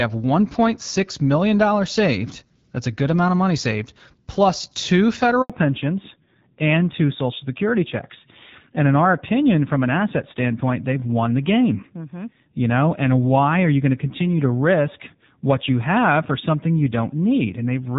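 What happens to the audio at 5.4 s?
Right after "money saved plus two", a handover gap leaves the call briefly without speech frames from 5.42 to 5.50 s, so the sound drops to silence for about 80 ms. From 5.50 s to the end, a fallback to narrowband shifts the call from HD Voice to an older codec, cutting everything above 4 kHz. The speech turns duller and rougher, which fits a drop to AMR-NB at around 7.4 kbit/s.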